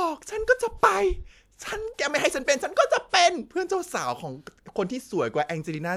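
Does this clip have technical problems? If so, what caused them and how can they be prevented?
No, nothing in this speech recording stood out as a technical problem on listening, so there is nothing here to trace to a cause or to prevent.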